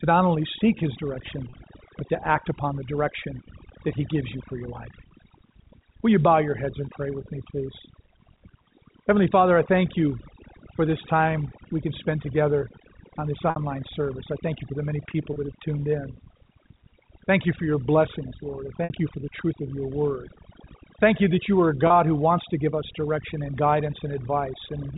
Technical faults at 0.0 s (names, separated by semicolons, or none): overdone noise removal